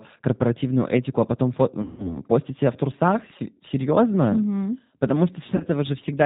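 G.729 codec coding runs through the whole speech clip, with plainly audible damage. The voice is rebuilt from a vocal tract filter, a pitch predictor and a few pulses per 5 ms subframe, so it sounds rough and slightly synthetic, with nothing above 4 kHz. The character fits an 8 kbit/s G.729A stream. VoIP packet loss concealed by the speech codec occurs from 1.82 to 2.20 s and again from 5.56 to 5.63 s. In both places the decoder had no fresh data and stretched its last pitch and filter into a buzzy tone or coloured noise that fades, with gain dropping frame by frame. The gaps sound like about 160 ms and 40 ms of missing audio, which fits sixteen and four lost 10 ms frames. Because each frame builds on the one before, the voice stays weak and distorted for a short while after each gap ends.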